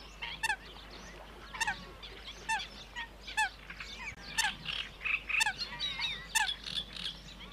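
This clip of sounds has a short dropout from 4.15 to 4.17 s. The sound cuts out for 20 ms, with its edges blurred by the codec, then resumes from where it stopped. This is a gap at a join of encoded pieces. The audio was encoded in separate sections, joined every 6 s, and put together without trimming, so one section's start-up delay and the previous section's end padding remain as silence.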